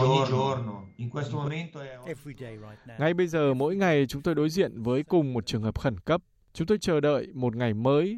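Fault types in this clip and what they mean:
Doubled audio track: From the very start until about 1.48 s, every sound is followed by a second copy about 5 dB quieter arriving roughly a third of a second later, with no reverb tail or room colour of its own. At 1.48 s the echo cuts off abruptly. The likely cause is the same signal being mixed in twice, perhaps through a slower second capture path or an edit that left two misaligned copies stacked.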